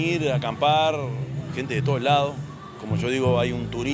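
No technical faults are audible anywhere in the clip.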